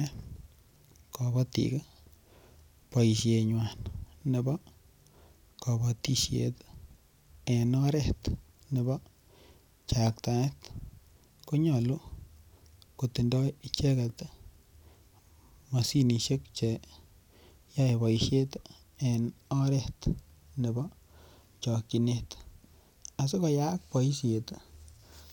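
It's a speech recording with one corrupt frame decoded at about 6.08 s: a short, fairly quiet chirp, squeak, blip or burst of noise where the decoder played a couple of damaged compressed frames anyway, so misread data put energy at the wrong frequencies for that instant.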